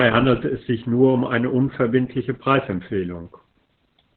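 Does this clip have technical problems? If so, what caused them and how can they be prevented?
Yes. Opus voice compression affects the speech throughout. Nothing is present above 4.4 kHz, and the voice sounds muffled, hoarse and slightly robotic. This fits the codec's narrowband SILK mode with coarsely coded excitation, which points to a bitrate of about 8 kbps. To prevent it, encode at a higher bitrate, around 24 kbps or more, so Opus keeps a wideband or fullband signal.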